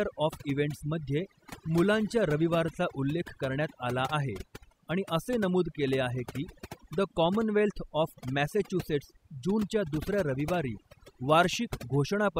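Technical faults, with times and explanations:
Throughout, overdone noise removal: overly aggressive suppression drops bands near the noise estimate, leaving twinkling specks and a spectrogram of isolated flickering time-frequency islands.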